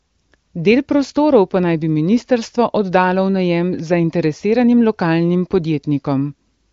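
No technical faults can be heard in this speech. It passes through an AMR wideband (HD Voice) codec, which leaves nothing above about 7.4 kHz, and its clarity fits the codec's high 23.05 kbit/s rate.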